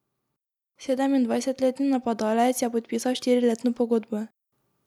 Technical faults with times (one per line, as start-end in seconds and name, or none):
0.64-4.27 automatic gain rising